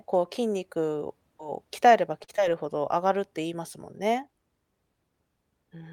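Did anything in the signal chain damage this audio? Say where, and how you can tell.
Yes, the network-to-receiver stage did. At 2.23 to 2.30 s there's a short stall from a late packet: the jitter buffer ran dry, so the receiver stretched the last sound by about 48 ms and then resumed from the same spot. Nothing's lost, but that sound hangs too long and nudges everything after it later.

Right after, at 2.36 to 2.40 s, comes a short concealed packet loss. About 20 ms of audio never made it to the decoder, and the receiver papered over the gap by carrying the previous sound forward and blending back in, which leaves a quick smear or wobble.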